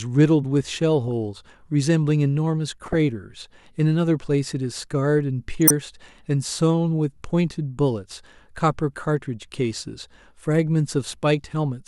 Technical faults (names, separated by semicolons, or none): corrupt frame decoded